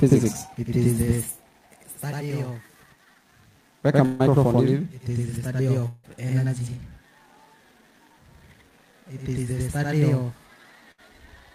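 Throughout the clip, every sound is followed about 93 ms later by a second copy at the same level, heard as a slap echo or doubling. This is channel delay (doubling). One channel ran late by a long buffer, which fits a 4096-sample offset, and both channels were then summed to mono. On a waveform, each transient appears twice with a fixed 93 ms spacing. On a spectrogram, onsets show a repeated edge, and the interference between the two copies produces comb-like striping.

At 4.05 s a burst of packet loss begins and lasts until 4.21 s. About 140 ms of audio never arrived. The receiver filled the gap by extending the last sound and turning it down, so a held, fading tone or hiss replaces the missing material. Playback then resumes further on. On a spectrogram, the final spectral shape stretches into flat horizontal bands that thin out, and the waveform shows a decaying envelope before an abrupt jump.

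From 5.87 to 6.06 s, about 160 ms goes missing, and the gap is bridged by a concealment tail that fades in the same way before the sound returns further along. The likely cause is a long network dropout. On the spectrogram, frozen bands fade across roughly 0.16 s before the content resumes with no continuity.

A second burst of packet loss runs from 10.92 to 11.00 s. About 60 ms is lost, and a short faded fill covers most of the gap. This one is brief, shown as a small smeared patch on the spectrogram and a narrow dip in the waveform envelope, followed by a discontinuous restart.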